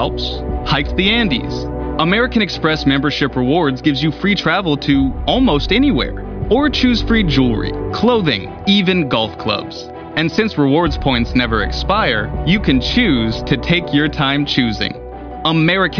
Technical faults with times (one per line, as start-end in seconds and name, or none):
none